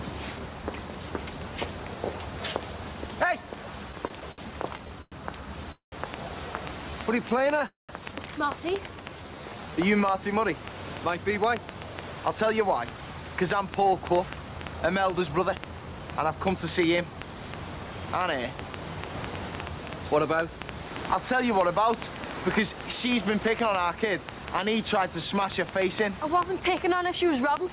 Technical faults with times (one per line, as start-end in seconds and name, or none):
3.92-4.40 repeated stalls (stutter)
4.78-5.14 repeated stalls (stutter)
5.72-5.94 call audio freeze
6.14-27.72 train of clicks
6.90-7.53 jitter buffer slow-down
7.30-7.63 repeated stalls (stutter)
7.67-7.91 call audio freeze
8.91-9.72 jitter buffer slow-down
11.18-16.07 jitter buffer speed-up